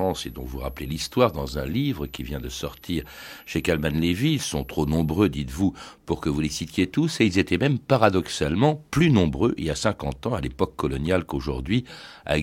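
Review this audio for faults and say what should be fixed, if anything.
A switching supply whistle runs from 0.0 to 5.28 s, a high tone drifting between 11.56 and 12.05 kHz, roughly 30 dB below the speech. A switch-mode supply is cycling at an audible rate, and its pitch shifts as the load changes. To prevent it, power the recording chain from a linear or well-filtered supply and keep switching adapters away from the signal path.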